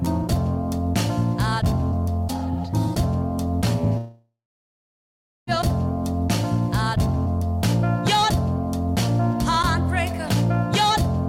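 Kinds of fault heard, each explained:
Long network dropout: at 3.97 to 5.50 s the last sound stretches into a fading buzz for about a third of a second, then 1.14 s of silence. Audio returns with 1.5 s missing, likely because packets stopped arriving and the receiver covered the gap.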